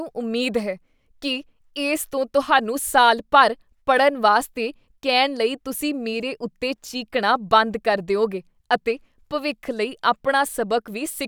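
No technical faults are audible.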